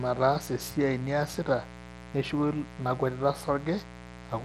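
Mains buzz runs through the whole speech clip: a steady, raspy 60 Hz buzz sitting only about 15 dB below the voice. Sharp switching spikes, twice per mains cycle, leak in through a dimmer, rectifier or poor shielding, spreading harmonics up into the kilohertz range.

Bluetooth SBC compression also affects the entire clip. The treble flickers and thins, with gritty noise and aliasing riding on the voice. This is likely SBC encoding at a rate that points to around 96 kbps, where coarse sub-band quantisation starves the upper bands.

Clock slip clicks appear between 0.23 s and 4.39 s as faint, regular ticks, roughly every one and a half seconds, a handful in all. Two devices likely run on unsynchronised clocks about 15 ppm apart, so a single sample is dropped or repeated each time the drift reaches a whole sample.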